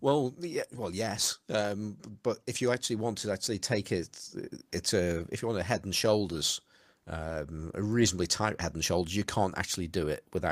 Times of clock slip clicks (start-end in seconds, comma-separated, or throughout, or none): none